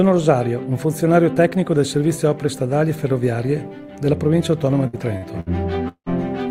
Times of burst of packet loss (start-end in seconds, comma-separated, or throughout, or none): 4.87-5.49